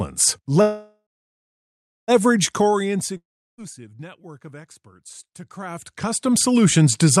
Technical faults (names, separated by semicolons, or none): call audio freeze; long network dropout